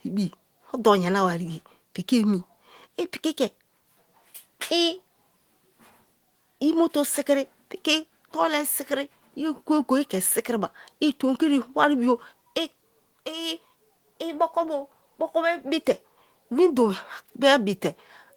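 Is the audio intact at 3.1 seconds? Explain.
Yes, the speech at 3.1 seconds is intact, with no audible fault at that moment.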